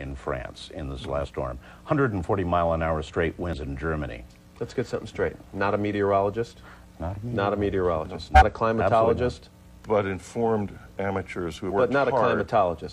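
Compressed frames are skipped at 1.21 to 1.27 s, 3.53 to 3.58 s, 8.32 to 8.43 s and 11.66 to 11.71 s. Whole frames never reach playback, so the audio leaps ahead roughly 50, 100, 50 and 150 ms. Unlike a dropout, there's no silent gap.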